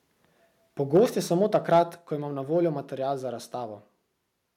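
From 0.94 to 1.02 s, just before "je samo", the speech hits microphone overload, likely from input gain set too high, so peaks run about 3 dB past the converter's ceiling and a few percent of samples are sheared off. It sounds like a brief harsh crackle. On a waveform the tops flatten; a spectrogram shows a smear of broadband energy above the voiced harmonics. Again from 1.54 to 1.8 s the overload returns, about 2 dB over, with a smaller share of samples clipped and a lighter, longer rasp.

At 0.97 s, inside that first burst and again right before "je samo", the level drops in one step by about 2 dB. This is a microphone volume step-down, likely call software reacting to the clipping by cutting the device's input gain. At 1.98 s, just before "ko imam na voljo", a larger step of about 4 dB follows. Each is heard as speech and background sinking together at once. The waveform envelope shrinks abruptly, and the spectrogram dims evenly across all frequencies at that instant.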